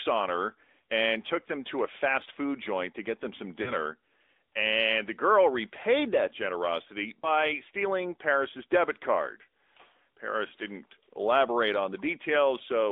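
Throughout, the speech carries the AMR narrowband mobile codec: band limited to about 300 Hz to 3.7 kHz, with plainly audible buzzy, synthetic coding damage consistent with a 10.2 kbps mode. From 3.62 to 3.74 s, lost AMR speech frames, about 40 ms worth, fitting two frames, make the decoder stretch and fade the previous sound before recovery. At 7.20 to 7.29 s, a single lost frame gives a shorter dip or warble.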